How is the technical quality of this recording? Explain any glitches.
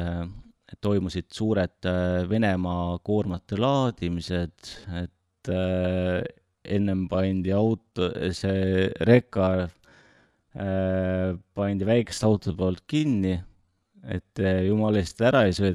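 The recording has one fault: a time-stretched section running from 3.21 s to the end of the clip.

At 3.21 s, just before "enne kui rahad käes", the pace abruptly slows to about 0.69 times the original speed while the pitch holds steady. This is likely pitch-preserving stretching that lengthens the audio by repeating short pieces. On a spectrogram, harmonics keep their spacing but syllables widen. The waveform shows elongated, repetitive envelopes.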